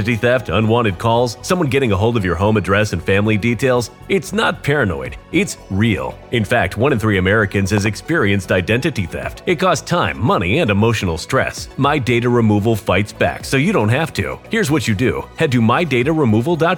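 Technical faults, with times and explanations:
7.78 to 7.88 s, loud pop: two sharp pops in quick succession, around 10 dB above the sound, which carries on underneath. Likely a sudden voltage step or pulse from a plug, switch, static or driver glitch, added to the signal and shaped by later circuits.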